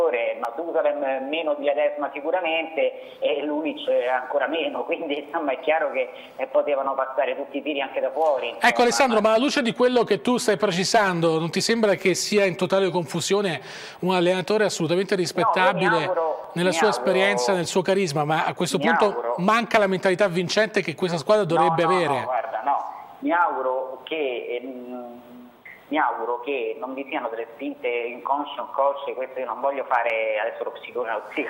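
The stream likely lost a fraction of a millisecond of samples, dropped samples, at 0.45 s, 16.44 s and 30.10 s, so the waveform jumps straight to a later value. Each gap removes no audible sound but leaves one sharp click.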